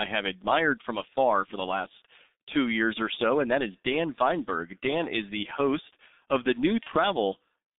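Muffled, hoarse speech with smeared consonants runs through the whole clip. Nothing is heard below about 200 Hz or above about 3.7 kHz, and the voice has the coarse, rough texture of very low-rate coding. This is the G.723.1 codec. It squeezes speech into a narrow telephone band and updates its model of the voice only every 30 ms, so fast consonant detail is averaged away. The heavy damage fits a rate around 6.3 kbit/s. Near the end, from 6.83 to 6.90 s, the speech briefly turns into a short smear that dips in level before clearing. This is VoIP packet loss concealed by the speech codec. The decoder filled a gap of about 30 ms, which points to a single lost frame, by repeating its last pitch and vocal-tract shape at falling gain. Because each frame builds on the previous one, the sound stays weak or distorted for tens of milliseconds or more after the gap.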